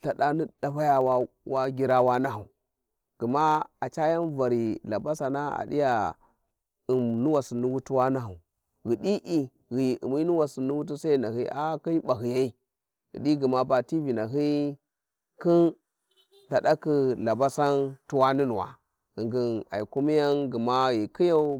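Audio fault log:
throughout: block size mismatch (truncated). A buzz near 91.9 Hz marks the block rate, where each block's tail is discarded and the waveform jumps. This shows as a step roughly every 10.9 ms and a spectrogram comb at 92 Hz multiples. Speed stays at 1.0x.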